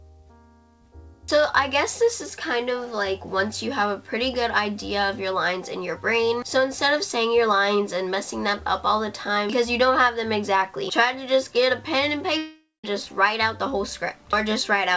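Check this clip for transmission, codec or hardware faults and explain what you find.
One fault, near the end. From 12.38 to 12.85 s there's what sounds like a long network dropout: audio likely stopped arriving, the receiver stretched the last sound into a fading buzz, then about 170 ms of silence before playback resumes. The band stops at 8 kHz, which fits a G.722 call path.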